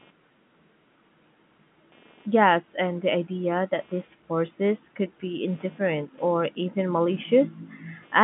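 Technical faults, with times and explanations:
Throughout: computer activity noise. A buzzing runs under the speech, pulsing at roughly 200 times a second and sitting about 30 dB below it. It comes from the computer's own load changes, which disturb the shared audio ground. It follows the machine's activity, not the speech.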